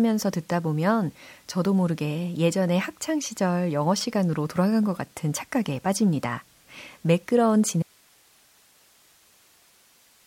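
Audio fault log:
7.83–10.26 s, audio dropout to a faint residue: speech cuts out abruptly, leaving only hiss roughly 35 dB down to the end, likely a lost signal feeding a still-live path.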